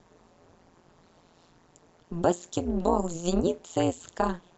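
Throughout the recording, frames were windowed and overlap-added with a gain that does not sum evenly. This overlap-add ripple makes the level swing by about 60 dB roughly 150 times a second, so the speech takes on a metallic buzz with extra tones around it.

At 3.80 s, bit errors got past the error correction of a weak DAB link and corrupted samples in the MP2 data. This DAB burbling puts short blips of noise in single sub-bands, producing a brief patch of burbling over the speech.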